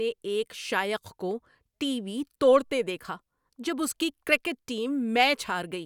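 No technical faults are audible anywhere in this recording.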